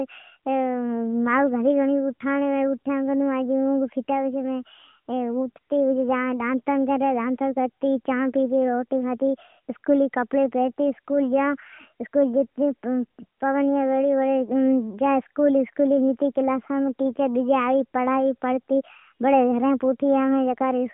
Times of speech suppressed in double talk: none

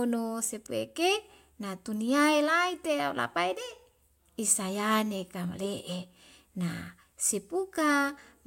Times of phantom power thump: none

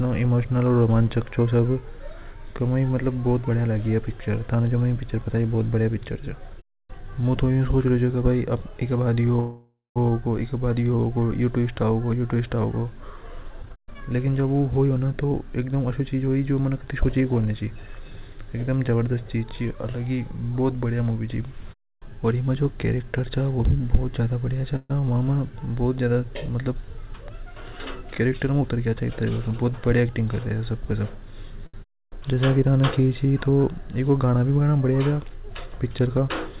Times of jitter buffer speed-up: 13.62-16.23, 26.79-29.45

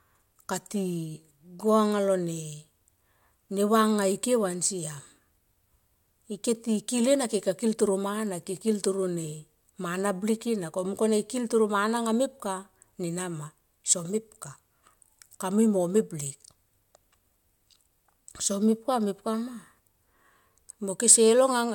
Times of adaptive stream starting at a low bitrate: 0.00-2.00

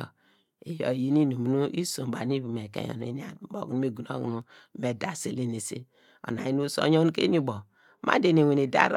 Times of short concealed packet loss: none

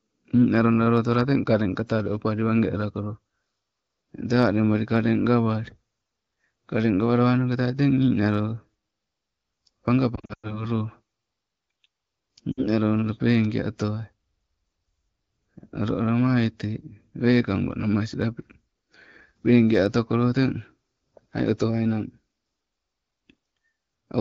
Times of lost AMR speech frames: 10.15-10.65, 12.51-12.66

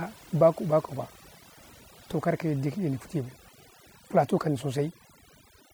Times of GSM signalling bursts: none

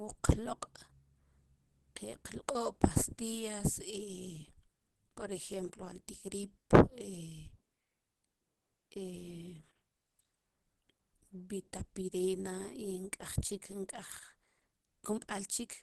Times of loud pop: none

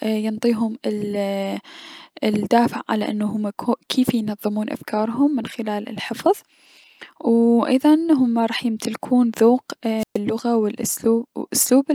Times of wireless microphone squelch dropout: 9.98-10.18

